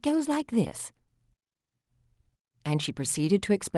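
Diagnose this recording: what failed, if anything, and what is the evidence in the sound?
The speech has a faint, uneven unsteadiness throughout, as if its pace wavers slightly. This is clock drift between sender and receiver at the buffer stage: the sender's clock runs about 2% slow, so the receiver's jitter buffer keeps draining and must be topped up.

Between 0.28 and 3.26 s, small hiccups recur at irregular spacing, all stretching the speech and slowing playback to 98% speed. These are repeated timing corrections: the receiver repeats short slices, around 70 ms in total, to keep the buffer fed. Above this, the Opus call codec caps the sound at about 12 kHz.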